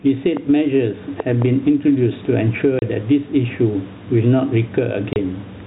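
Gain pumping runs through the whole speech clip, with a swing of about 10 dB. The likely cause is input gain set far too high, so a fast limiter keeps clamping down, squashing loud and soft parts together.

A loud pop lands at 0.37 to 0.39 s, then two more in quick succession between 1.20 and 1.44 s, each peaking about 10 dB above the speech. They sound like sharp thumps riding on top of the talking, which continues underneath. The likely cause is a sudden voltage step from a plug, switch or static discharge.

Packet loss filled with silence cuts the speech at 2.79 to 2.82 s and again at 5.13 to 5.16 s. Each gap is 30 ms of dead silence with hard edges, which points to a single lost packet replaced by nothing.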